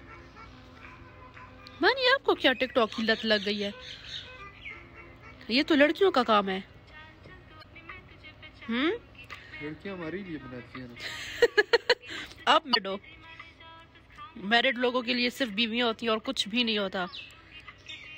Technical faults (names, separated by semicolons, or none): damaged data in a compressed stream